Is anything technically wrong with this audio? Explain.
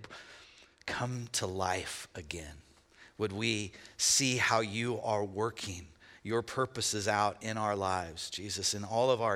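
Yes. From 1.12 s to the end of the clip, the speech has pre-emphasis left on. The treble was boosted with a CD-style 50/15 µs curve and never given the matching de-emphasis cut, so 10 kHz sits about 8 dB above 1 kHz. The result is thin, bright and hissy sibilance. Unlike a high-pass filter, the low end is still fully present. The excess rises smoothly above a few kHz, which is the signature of an emphasis curve.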